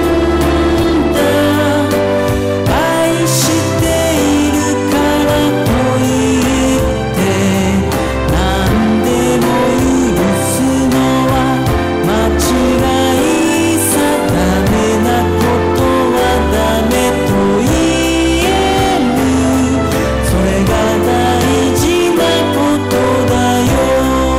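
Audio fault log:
Throughout: hard clipping. The whole clip is being pushed about 12 dB past what some stage in the chain can pass, so the peaks get sliced off flat. Nearly a third of the waveform is sitting against that ceiling. Those squared-off tops throw extra harmonics way up the spectrum, which is why it isn't just the odd crackle. Every loud moment comes out with a harsh, buzzy fuzz riding on it.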